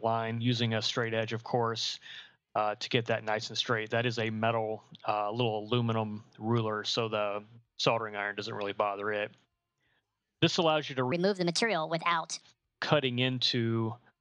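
The audio contains one section at the wrong speed, from 11.12 to 12.41 s, where playback runs at 1.39 times normal speed and pitch rises by about five semitones, so the sound turns abruptly high and hurried. A likely cause is that segment being resampled or clocked at the wrong rate.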